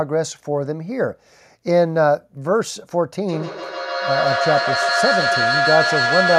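From 3.28 s to the end of the clip, the speech is caught in a feedback echo between two devices. A second device in the room replays this audio, and its loudspeaker output reaches the microphone again, which the microphone's own echo canceller cannot remove. Each syllable returns roughly every 150 ms, with repeats reaching about 2 dB below the direct speech. A spectrogram shows harmonic bands smeared into regularly spaced copies, and the waveform envelope never settles between syllables.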